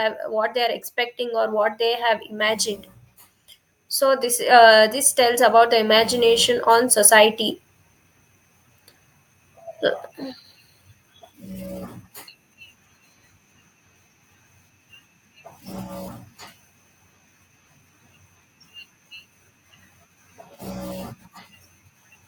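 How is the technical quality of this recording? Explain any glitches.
The recording has automatic gain rising twice, from 0.33 to 2.68 s by about 4 dB and from 4.0 to 7.43 s by about 6 dB. The gain control judged the input too quiet and raised it gradually, so the speech and the background noise swell together. A talker simply getting louder would leave the background level unchanged.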